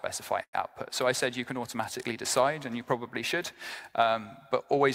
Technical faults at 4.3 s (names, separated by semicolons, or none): none